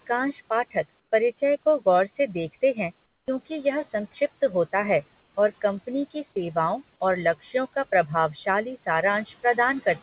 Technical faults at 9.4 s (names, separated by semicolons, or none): speech cut by the noise suppressor